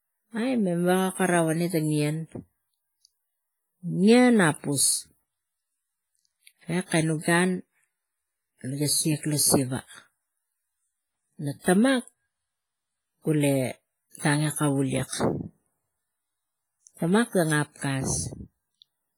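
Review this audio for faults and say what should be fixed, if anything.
Throughout the speech there is heavy ringing, washy smearing and a hiss that swells and fades with the signal. That is likely WMA compression at a low rate, around 24 kbps. Long transform blocks spread quantisation noise and zero weak spectral lines. Unlike broadband noise, this hiss follows the signal instead of staying constant. Re-encode from the original at a much higher bitrate or in a lossless format.

Pre-echo appears at 17.77 to 17.82 s. A short hiss arrives about 51 ms before a sharp attack and softens its onset, because the codec spread noise sized for the loud attack across the quiet start of the block. Reverb or echo trails after the sound, but this smear comes ahead of it. Use an encoder with block switching or a higher bitrate.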